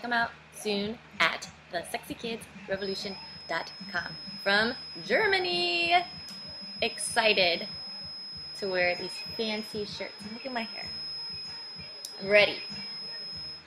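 A feedback whistle at 5.1 kHz runs from 2.73 s to the end, about 10 dB below the sound, likely from a speaker-to-microphone loop held at the feedback point; spectrograms show a thin horizontal line.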